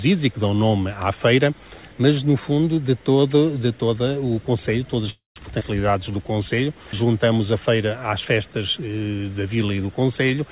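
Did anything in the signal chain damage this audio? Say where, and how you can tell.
Yes. At the network and jitter-buffer stage there is a call audio freeze from 5.1 to 5.38 s. Packets were likely held up in transit, so the buffer ran dry and the receiver stretched the last sound into a fading fill, reaching silence for about the final 150 ms. The audio then resumes where it stopped. The 258 ms gap was inserted without any loss, pushing everything after it later.

A skip ahead follows at 5.60 s, again in the jitter buffer. Having built up a backlog from the stall, the buffer dropped a short stretch of waiting audio to catch up. Roughly 70 ms is missing, bridged by only about 8 ms of fill, so the sound jumps abruptly from one point to a later one. That trims the added latency by around 50 ms.

From 5.91 to 6.33 s there is a jitter buffer slow-down. Running low again, the buffer repeated single pitch periods and pause fragments to rebuild its reserve. 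Playback drops to 88% speed at unchanged pitch and gains 60 ms, so sounds in that stretch are audibly drawn out and may warble slightly. Throughout the clip, the call path limits the audio to below 4 kHz, which fits a G.711 A-law codec.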